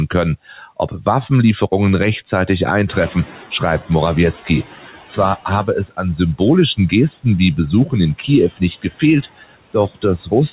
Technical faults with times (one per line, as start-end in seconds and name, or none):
0.00-10.52 noise suppressor artifacts
0.48-0.61 speech cut by the noise suppressor
2.87-4.83 noise suppressor catching up
9.22-10.04 speech cut by the noise suppressor